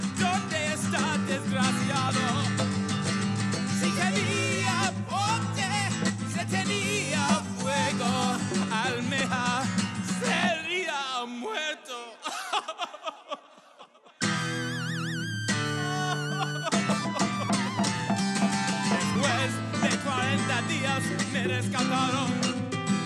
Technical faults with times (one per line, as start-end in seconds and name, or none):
19.15 audio missing between chunks